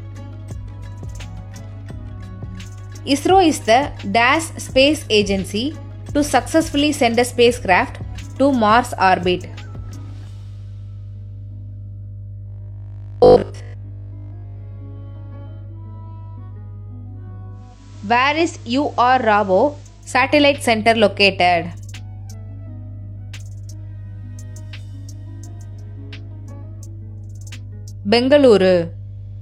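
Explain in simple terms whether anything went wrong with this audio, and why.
Mains hum runs through the whole clip: a steady low 50 Hz tone, loud enough to notice, leaking in from the power line through a ground loop or nearby transformer.

Robotic sound from repeated short buffers, 12.46 to 14.60 s: nearly all the sound becomes a rigid 50 Hz buzz, likely from fresh audio arriving too slowly, so 20 ms snippets get replayed.

Digital radio blending to analogue, 17.51 to 20.23 s: the digital signal drops, and over about half a second the sound fades to the FM broadcast, becoming quieter and faintly hissy.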